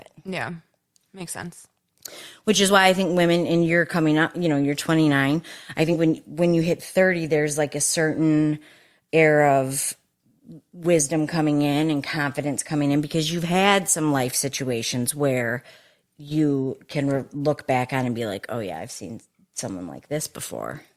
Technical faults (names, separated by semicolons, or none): compressed frames skipped